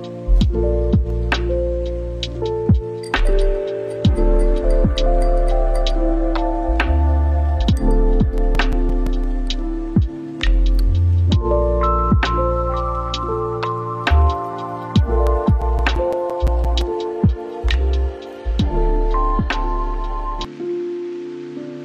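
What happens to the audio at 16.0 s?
At 16.0 s the audio is in the middle of a run of CD scratch ticks, lasting from 15.27 to 17.16 s. About twelve small ticks fall in that span, roughly six a second, each only a few milliseconds long. A blemish on the disc wipes out more data than error correction can repair, once per revolution. The player then fills or mutes those samples, leaving a steady, rhythmic clicking or brief gaps.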